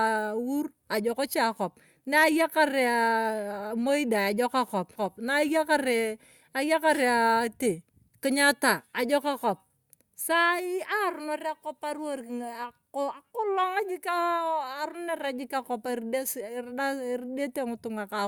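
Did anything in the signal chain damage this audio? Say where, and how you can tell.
Yes. At the network and playback stage, the speech breaks between 4.95 and 5.00 s, where it jumps abruptly forward with a brief blip at the join. The likely cause is a stream segment skipped: one chunk of the segmented stream failed to arrive or load, and the player moved straight on to the next segment. The speech on either side doesn't connect, because a stretch of the programme was never played, and the blip marks where the two ends were butted together.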